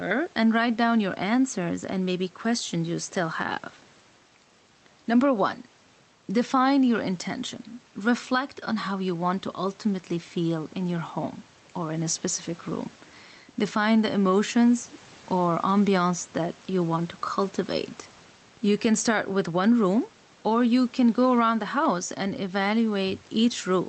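Throughout the speech, the gain swings by around 10 dB, so loud and quiet passages sit squashed together. This gain pumping likely comes from input gain set far too high, with a fast limiter pulling down every peak. The room noise sits about 33 dB below the speech, and the top end stops near 8 kHz, which fits a call codec such as Opus at a low bitrate.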